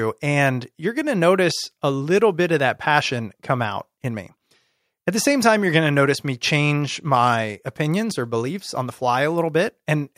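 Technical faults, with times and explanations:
No technical faults can be heard in this speech.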